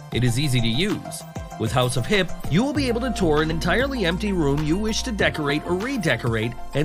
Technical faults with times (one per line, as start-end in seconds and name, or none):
3.51 compressed frames skipped
5.49 compressed frames skipped